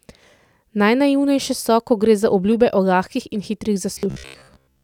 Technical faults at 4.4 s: robotic sound from repeated short buffers

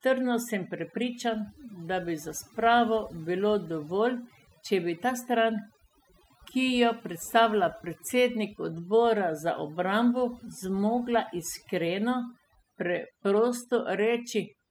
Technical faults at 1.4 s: overdone noise removal

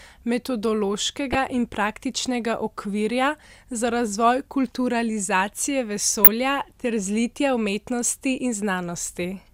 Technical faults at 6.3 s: DAB burbling

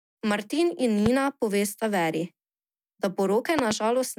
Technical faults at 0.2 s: none

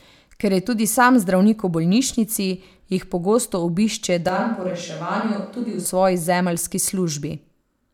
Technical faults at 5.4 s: switch to a distant microphone

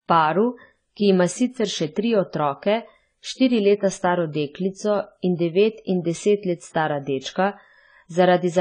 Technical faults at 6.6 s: AAC compression

